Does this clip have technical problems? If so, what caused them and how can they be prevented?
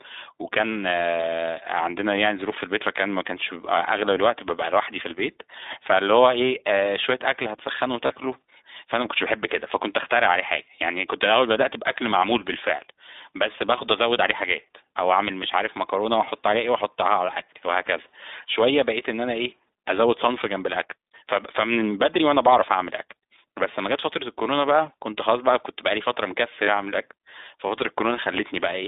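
Yes. The iLBC codec is in play for the whole clip: each 20 ms frame's excitation is coded on its own at a low rate, which fits iLBC's 15.2 kbps mode, and the line passes only about 200 Hz to 3.7 kHz. The speech therefore sounds narrowband and muffled, with plainly audible roughness and a slightly synthetic texture. To prevent this, carry the call over a wideband codec such as Opus or G.722 instead of iLBC.

The lost iLBC frames come from packets dropped in transit at 8.06 to 8.12 s and at 26.64 to 26.70 s. Each gap lasts about 40 ms, which fits two consecutive 20 ms frames going missing. The decoder covered each gap by repeating the last pitch cycle blended with noise, so both spots sound like a brief held, breathy buzz. Because iLBC frames are decoded independently, normal speech returns as soon as the next frame arrives. To prevent this, reduce packet loss on the network path or add forward error correction or redundant frames so that missing packets can be rebuilt.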